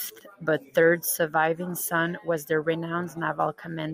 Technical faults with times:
none

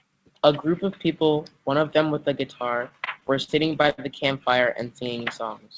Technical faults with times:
2.89-4.00 repeated stalls (stutter)

